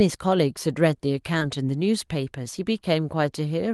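At 1.39 to 1.43 s there is a short concealed packet loss. About 20 ms of audio arrived too late for the decoder, and roughly 12 ms of it was filled by extending the preceding sound before blending back. It is heard as a brief smear in the speech.

Overlapping its end, from 1.41 to 1.43 s, and again at 2.57 to 2.59 s, a lost packet was rebuilt from error correction. In each case one 20 ms packet was replaced by the low-bitrate redundant copy carried in the following Opus packet. There is no gap, but those frames sound rougher and noisier. The call path's upper limit is near 12 kHz.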